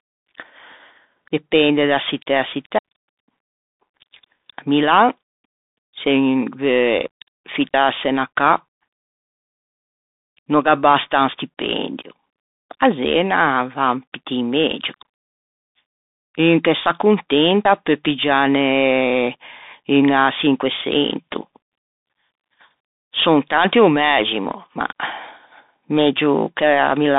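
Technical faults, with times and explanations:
Throughout: Bluetooth CVSD headset codec. Everything above about 3.8 kHz is gone, so the speech sits in a narrow phone-like band. The one-bit delta coding can't track fast high-level changes, giving scratchy s sounds and a granular hiss underneath, which fits 64 kbps CVSD.
2.78, 7.74, 12.70, 17.65: audio missing between chunks. Short skips, around 40 ms each, come roughly every 5 s, one just before "'na cà" and one right after "un stipendio". The two sides butt together with no gap, likely lost while one recording chunk closed and the next opened.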